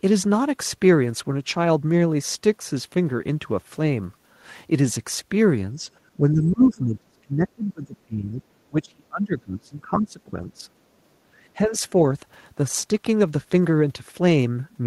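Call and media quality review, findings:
Speech suppressed in double talk: slight dip 5.76–5.89 s, then deep cuts of around 25 dB, 6.17–8.44 s and 8.69–10.67 s. Likely echo canceller over-suppressing. Gain falls in uneven chunks, not silent gaps with clicks as in packet loss.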